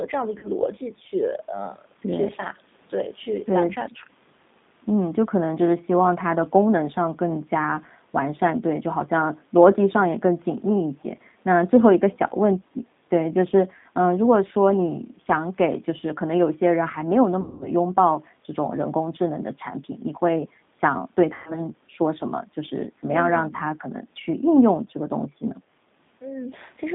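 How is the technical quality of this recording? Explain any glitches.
Quality is limited by a low-rate phone codec across the whole clip, plus three short dropouts where the decoder had to fill gaps.

G.729 codec: The speech is confined to roughly 150 Hz to 3.7 kHz, and the codec damage is plainly audible. It has a thin, slightly rough, synthetic edge, which fits an 8 kbit/s G.729A stream. The codec doesn't send the waveform. It rebuilds the speech from a vocal-tract filter, a pitch predictor and a few pulses per frame, so fine detail is lost and everything above the line band is gone.

VoIP packet loss concealed by the speech codec: Gaps occur at 0.39–0.49 s, 17.41–17.68 s and 21.34–21.60 s. The missing stretches are about 40 ms, 200 ms and 120 ms, which points to runs of 10 ms frames going missing. The decoder fills each gap by stretching its last pitch and filter and lowering the level as it goes. 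This comes out as a buzzy tone or a coloured noise that fades. The voice stays a bit weak or distorted just after each gap while the decoder recovers.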